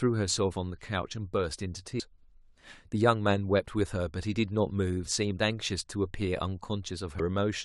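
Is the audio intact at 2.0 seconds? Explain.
No. At about 1.99 s the speech is broken by damaged data in a compressed stream, a glitch lasting under 20 ms. Corrupted bytes in the encoded stream leave the decoder unable to read that frame cleanly, so it loses sync and must lock onto the next valid frame header. The result is a brief chirp or blip. A spectrogram would show a thin vertical smear of broadband energy, and the waveform an abrupt discontinuity.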